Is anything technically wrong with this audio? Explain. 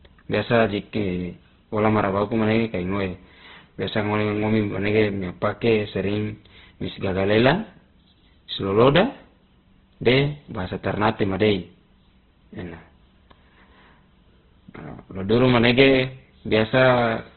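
Yes. Throughout the clip the speech shows heavy Opus compression damage. Nothing is present above 4.2 kHz, and the texture is rough and grainy. This likely comes from a narrowband encode at a rate near 12 kbps, where bands short of bits are filled with noise.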